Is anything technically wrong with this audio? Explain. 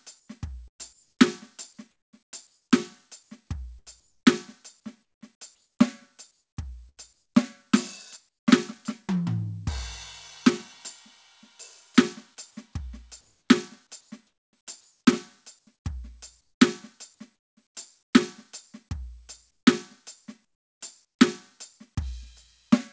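Yes, a few things. From 0.2 to 5.21 s the music is chopped, likely by the sender's voice detector cutting in and out, with about 1.3 s of sound swapped for flat filler noise. At 6.89 to 6.99 s there's a burst of packet loss: the receiver stretches the last sound for roughly 80 ms and fades it, then skips ahead. Comfort noise replaces the background at 8.29 to 8.47 s (about 13 dB quieter), 13.21 to 18.13 s and 19.51 to 21.19 s, likely from discontinuous transmission filling pauses with smooth synthetic hiss. Over the call path the top end stops at 8 kHz, which fits a wideband codec like G.722.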